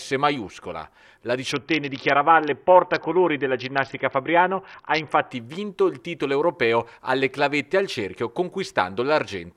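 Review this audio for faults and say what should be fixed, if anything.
From 1.52 s to 5.31 s the audio shows a Bluetooth SBC bit pool drop: the encoder's bit allocation fell sharply, so the upper sub-bands received little or nothing and the remaining bands were coarsely quantised. The treble goes dull and a gritty noise rises, which fits a bit pool falling from around 31 to about 6, roughly 55 kbps. On a spectrogram the high band is cut off abruptly across that span, with speckled noise filling the lower bands, and the full bandwidth returns at 5.31 s. To prevent it, reduce radio congestion or interference on the link, or fix the bit pool at a higher minimum so the encoder cannot drop this low.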